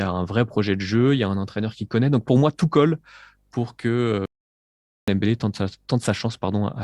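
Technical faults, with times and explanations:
4.26 to 5.08 s, audio dropout to silence. The speech cuts off mid-flow and returns about 0.82 s later. The gap is silent, with no room tone. The input was likely lost while recording continued writing silence, so that stretch is gone.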